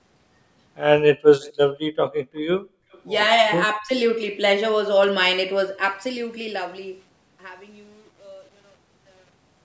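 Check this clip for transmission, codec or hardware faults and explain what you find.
Two kinds of fault are audible, both from the echo-control stage of a call.

Echo leak occurs twice, from 1.41 to 1.53 s and from 2.92 to 3.02 s. A faint delayed copy of the speech trails the original, about 240 ms late in the first instance and 259 ms in the second, sitting roughly 25 dB and then roughly 35 dB below the direct speech. The likely cause is a loudspeaker-side echo canceller that left part of its microphone pickup uncancelled and sent it back. The result is a short ghost of the speech rather than a sustained echo.

Speech suppressed in double talk affects 3.8 to 3.9 s. For about 100 ms the talker's level drops by about 20 dB, so the speech briefly dips away. The likely cause is an echo canceller that could not separate the near talker from loudspeaker echo while both sides were active and attenuated everything together. 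The dip is short. The band limit at 8 kHz is separate from these faults.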